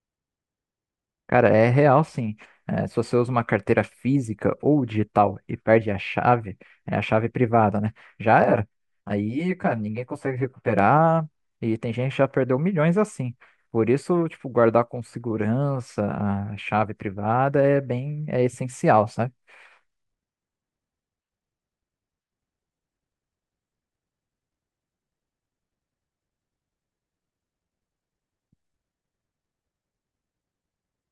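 From 8.44 to 10.79 s the speech turns hollow and phasey, with a thin, slightly boxy colouration, as if heard down a tube. This is channel delay (comb filtering). One channel runs late by around 10 ms, and when the two are summed to mono, the shared signal cancels at a series of evenly spaced frequencies. The first notch sits near 50 Hz, with further notches roughly every 100 Hz above it, carving fixed gaps through the spectrum.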